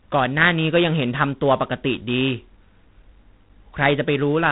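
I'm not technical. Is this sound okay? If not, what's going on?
No. The speech passed through G.726 ADPCM, a telephone-style codec that stores each tiny slice of sound as a rough guess at how it differs from the previous one. Here it ran at a low setting, so those guesses are coarse. From start to finish, the speech carries a harsh, rasping hiss that rises and falls with its loudness. Nothing above 3.9 kHz gets through, so the sound is dull and phone-like.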